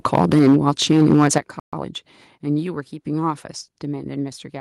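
Speech, and the first stretch from 0.05 to 1.38 s has crunchy, flattened peaks, with tops cut roughly 8 dB over the limit, likely microphone overload from the input gain being set too hot. You can hear the level drop abruptly at 0.39 s by about 4 dB and again at 1.38 s by about 9 dB. That sounds like microphone volume stepped down, likely the call software pulling the input gain back after the clipping. The audio then cuts out to silence for about 130 ms from 1.60 to 1.73 s, a playback stall likely caused by the player running dry or getting blocked. Right after, from 1.73 to 1.85 s, things rush along at double speed with pitch intact. That's time-compressed catch-up, with the player trimming and cross-fading small chunks to work off its backlog.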